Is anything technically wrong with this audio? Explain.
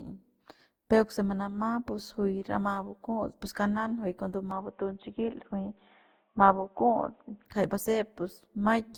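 Yes, two faults. Generation loss runs through the whole speech clip. The full band survives to about 20.1 kHz, but the sound is swirly, hollow and smeared, with blurred attacks. That is worse than one Opus pass at 64 kbit/s would leave. The likely cause is around ten re-encodes, each adding new quantisation noise and spectral holes on a shifted frame grid.

From 4.51 to 7.45 s there is an input switched to a poorer device. The likely cause is a change to another microphone or headset. Content above 3.8 kHz vanishes and the tone turns boxy, with a faint new noise floor about 50 dB down. There is no gap and no level jump. Unlike a plain low-pass filter, the colour and noise change too, and full bandwidth returns afterwards.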